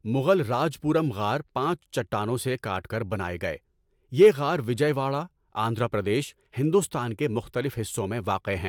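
No technical faults can be heard anywhere in this speech recording. Nothing in the audio stands out as a defect at any point.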